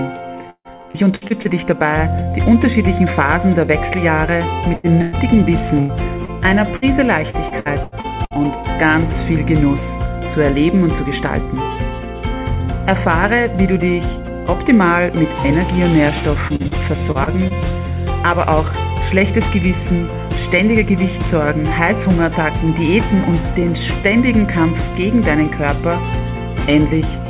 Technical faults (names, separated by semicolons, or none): repeated packet loss (robotic sound); burst of packet loss